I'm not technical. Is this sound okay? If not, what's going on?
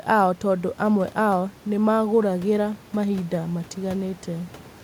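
Yes, no faults here.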